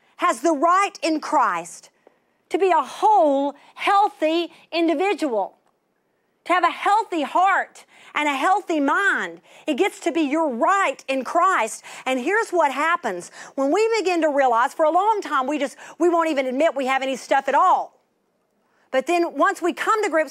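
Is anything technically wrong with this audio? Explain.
No, nothing is technically wrong with this audio.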